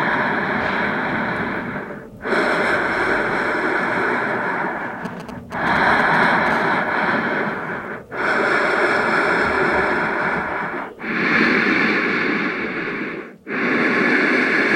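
From 5.05 to 6.48 s, GSM signalling bursts break in: a galloping dit-dit-dit of brief buzzes at 217 Hz, roughly 10 dB below the sound. A nearby 2G phone is sending short groups of radio bursts, which the audio circuitry rectifies into audible pulses.

From 6.51 to 7.71 s this turns into a steady GSM phone buzz, hard and raspy at 217 Hz with many harmonics, about 21 dB below the sound. The phone is now in a call, transmitting in bursts 217 times a second, and the rectified pulses form an unbroken tone.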